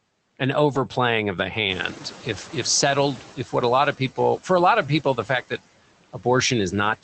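Noise suppressor artifacts run throughout. The suppressor cuts steady background noise by about 16 dB frame by frame, leaving a residue that dips between phrases and swells under speech.

At 0.75 s, just before "of the", a single lost packet is rebuilt from error correction. A 20 ms stretch plays from the low-bitrate backup copy, so there is no gap, just a brief rougher, noisier grain.

From 1.69 to 3.31 s, right after "of the", the noise suppressor is catching up. The room noise rises sharply around 1.5 s, and the suppressor's noise estimate lags. At first only about 8 dB is removed, so the noise comes through louder, then it sinks back over roughly 1.6 s as the estimate adapts.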